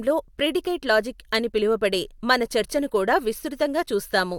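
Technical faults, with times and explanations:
No technical faults are audible in this speech recording.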